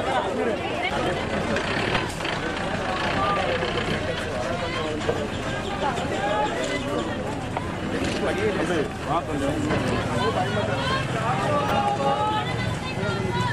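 At 1.94 to 1.97 s and again at 11.68 to 11.71 s there's a short blip of damaged data in a compressed stream. Corrupt bytes threw the decoder off its frames, so each one comes out as a brief disruption while it finds sync again.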